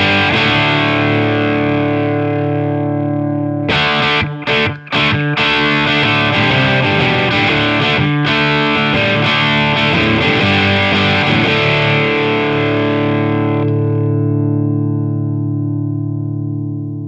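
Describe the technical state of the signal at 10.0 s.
At 10.0 s the audio is intact, with the sound carried through a G.722 call path that leaves nothing above 8 kHz.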